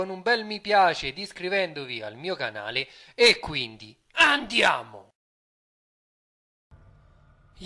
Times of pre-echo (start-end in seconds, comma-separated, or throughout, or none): none